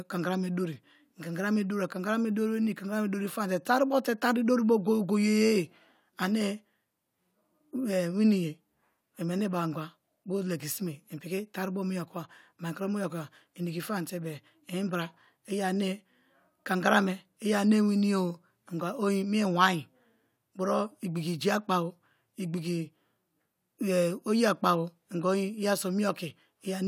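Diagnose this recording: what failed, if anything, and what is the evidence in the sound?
Nothing in this speech recording points to a failure at any stage of the chain. At no point does the sound break, jump or change character in a way that would call for a diagnosis.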